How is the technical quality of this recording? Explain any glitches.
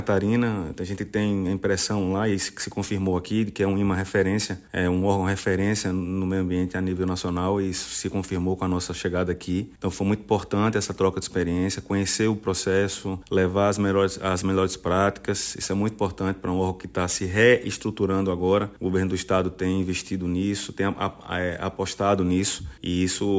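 The recording suffers from aliasing throughout.

The aliasing runs from start to finish. The sound was brought down to a lower sample rate without removing the high frequencies first. Anything above 8 kHz had no room and folded back below that line, landing at unrelated pitches. The fold point fits a drop from 48 kHz to 16 kHz. These false tones sit roughly 20 dB under the real sound. Hissy and bright parts turn gritty and metallic, and the spectrum stops abruptly at 8 kHz.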